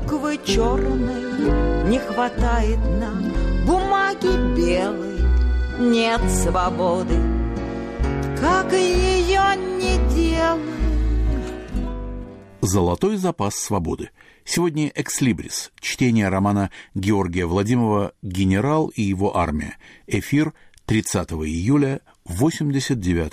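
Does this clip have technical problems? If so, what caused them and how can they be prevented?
No, there are no technical faults to report in this audio. With nothing going wrong, there is no cause to trace and nothing that needs preventing.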